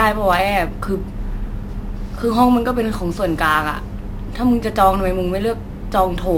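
Throughout the clip, the speech was resampled with no anti-imaging filter, a crude rate conversion that fits a move from 32 kHz up to 44.1 kHz done by simply repeating the nearest sample. Because the two rates line up only every so often, the duplicated samples fall in an irregular but repeating pattern, creating tones unrelated to the voice. The result is a gritty, inharmonic fizz roughly 25 dB below the speech, riding on loud and sibilant passages.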